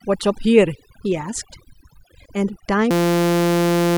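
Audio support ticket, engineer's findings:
Overdone noise removal, whole clip. Background collapses to near silence with twinkling specks. Denoiser threshold set too aggressive: individual frequency bands near the noise estimate get pulled far down or gated off, taking quiet speech detail with them. Differs from plain low-bitrate coding in that the speckle sits in the gaps between speech and the floor drops almost to nothing, rather than swirling evenly under everything.

System hang loop, 2.91 s to end of clip. Speech replaced by a steady buzz at 172 Hz. One 5.8 ms slice repeating exactly, which fits a 256-sample ring buffer replayed by the audio hardware after the host or driver froze. Roughly a second of audio lost. Distinct from a dropout or stutter: the identical repeat produces a pitched, sustained tone, not silence or irregular chopping.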